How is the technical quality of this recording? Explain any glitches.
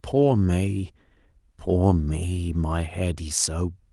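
No technical glitches can be heard anywhere in this speech recording. Nothing in the signal draws attention to itself at any point.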